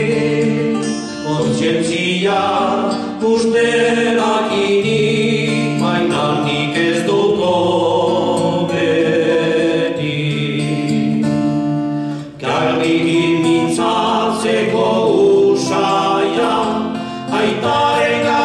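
Adaptive stream starting at a low bitrate, 0 to 4.0 s: the player began on a lean version, which fits 32 kbit/s AAC-LC, so nothing sounds above 9.6 kHz and codec artefacts are stronger. At 4.0 s quality jumps, fitting 96 kbit/s, with no gap.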